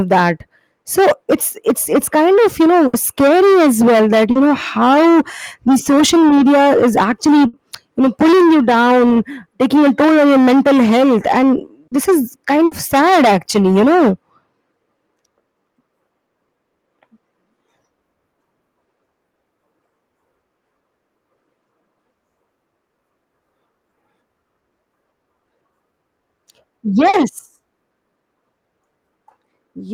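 At 2.87, 7.47 and 12.65 s a sound is briefly held as a fading buzz or hiss before the speech jumps ahead. Each is a burst of packet loss, with about 60 ms lost and filled in by the receiver. At 4.31, 11.87 and 27.09 s there are quicker smears or wobbles. These are short concealed packet loss, where about 40 ms never arrived and was patched by continuing the previous sound.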